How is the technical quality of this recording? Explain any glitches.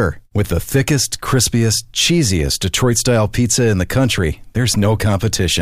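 No technical faults can be heard anywhere in the recording, so there are no glitches to explain.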